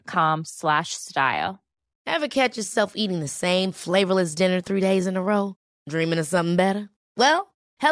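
Speech, with nothing technically wrong with it.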